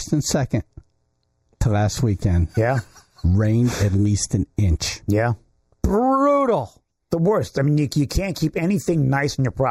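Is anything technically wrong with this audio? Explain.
Yes. Channel delay (comb filtering) runs through the whole clip. One channel arrives late by only a fraction of a millisecond, roughly 0.15 ms, and the two channels are summed to mono. Content common to both cancels at evenly spaced frequencies. The first notch falls at about 3 kHz, with further notches repeating higher up. This carves fixed gaps in the upper mids and treble, leaving the sound thin, hollow and phasey from start to finish.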